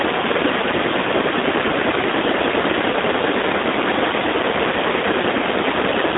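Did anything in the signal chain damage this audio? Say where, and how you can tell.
Yes, at the codec stage, across the whole clip. The speech sounds thin and slightly rough, with a buzzy, synthetic edge. Its band is boxed into roughly 250 Hz to 3.7 kHz, with nothing at all above 3.8 kHz. That signature fits the G.729 codec (the G.729A variant) at around 8 kbit/s. It rebuilds each 10 ms frame from a vocal-tract filter, a pitch predictor and a few coded pulses rather than the real waveform, which produces the plainly audible roughness.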